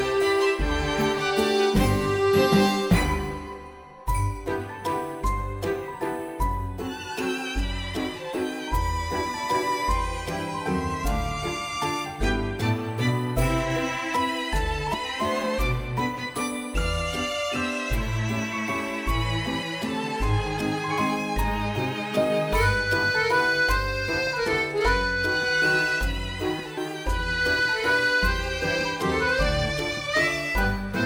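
At 14.93 s, 19.61 s and 26.77 s the sound briefly smears and lurches forward, a soft blurred blip rather than a sharp click. At the first and last points roughly a tenth of a second goes missing; at 19.61 s the gap is shorter, about 30 ms. These are compressed frames skipped: whole coded frames were dropped, and the skip lengths fit a frame of about 26.1 ms, one frame at 19.61 s and around four at the others. The overlap between adjacent frames blurs each join.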